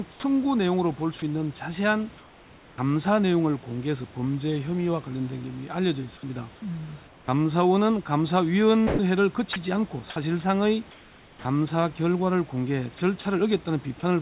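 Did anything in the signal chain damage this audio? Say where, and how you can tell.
Yes, and it's all in the call processing, where the voice detector gates the sender.

Sound dropped by the voice detector at 0.11 to 0.23 s: about 120 ms turns into steady noise, likely because the detector mistook the start for background.

Comfort noise replaces the background at 2.18 to 2.78 s and 7.07 to 7.28 s. The room hiss goes flat and featureless, about 5 dB then 3 dB quieter, likely from discontinuous transmission.

Onset clipped by the voice detector at about 2.75 s: roughly 30 ms of the start is missing, so the speech kicks in abruptly, likely because of a slow detector.

Sound chopped by the voice detector across 8.87 to 11.45 s and 12.98 to 13.25 s: edges flicker into synthetic noise, likely from detector toggling. All this sits inside a band that stops at 4 kHz.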